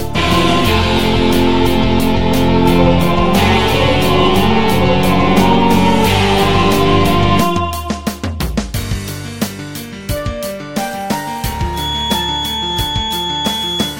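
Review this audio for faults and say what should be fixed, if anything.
A feedback whistle enters at 11.70 s and lasts to the end at 14.00 s. It is a thin, steady 3.4 kHz tone about 10 dB under the sound, swelling and fading slowly in level. The likely cause is a loudspeaker-to-microphone loop held just at the edge of oscillation. Unlike a runaway howl, it never builds, and unlike a fixed interference tone, its level drifts. Keep loudspeakers out of the microphone's pickup and reduce gain or notch around 3.4 kHz.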